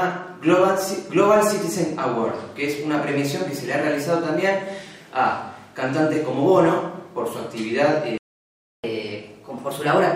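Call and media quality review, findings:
Playback stall, 8.18 to 8.84 s: audio cuts out mid-flow for about 0.66 s, then picks up again. Likely the player buffer running dry or the playback thread getting blocked, so output just goes silent until data arrives.

Catch-up at higher speed, 8.84 s to the end: straight after the gap, audio runs 1.1x fast and sits roughly a semitone and a half sharp. The player's resampling through its backlog to claw back the lost time, so pitch rises with speed.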